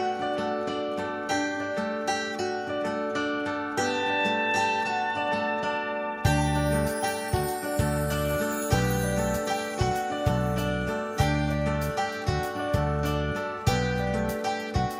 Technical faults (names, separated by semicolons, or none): none